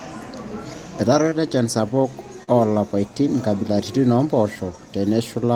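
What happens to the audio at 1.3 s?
Short concealed packet loss occurs from 1.29 to 1.33 s. Missing speech was patched by extending the preceding sound. It leaves a brief smear.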